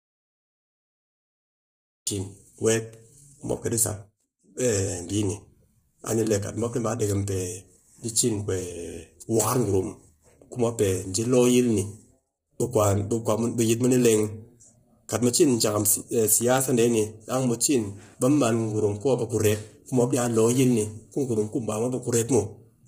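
From the first instant the clip is already inside an audio dropout to silence, which lasts until 2.07 s, when the speech comes back in mid-flow on "cin weet". The gap is silent with no room tone or hiss, which sets it apart from a quiet passage, a noise gate or a fade. The input was likely lost, through a disconnect, a failed link or a mute, while the recorder kept writing zeros.

Throughout the speech, heavy low-delay AAC compression makes the voice rough and grainy. Noise fills the gaps between the pitch harmonics, and the top band sounds thin and synthetic. The likely cause is AAC-ELD running at a low rate, which fits roughly 24 kbps. Its short frames of about 10 ms keep the delay low, and that noise between the harmonics is what distinguishes it from plain low-pass band-limiting.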